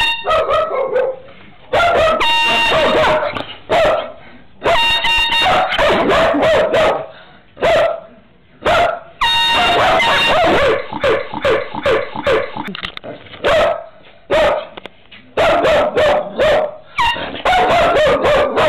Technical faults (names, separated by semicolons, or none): broken-record loop